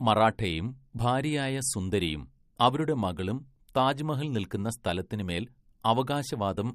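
Throughout the speech the sound has a watery, swirling quality, with s sounds turned metallic and chirpy, consonant attacks smeared, and nothing at all above 15.1 kHz. The likely cause is MP3 compression at a low bitrate, which fits something near 48 kbps. Short of bits, the encoder chops the treble at a fixed point and zeroes quieter frequency lines that flicker on and off between frames, producing the swirl and the plainly audible damage.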